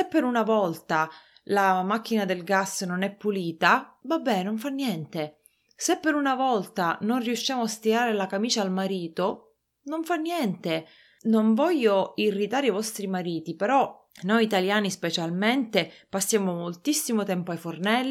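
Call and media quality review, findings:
Nothing to flag on this speech recording; no faults turned up anywhere in the review, so there's nothing to trace back to a component.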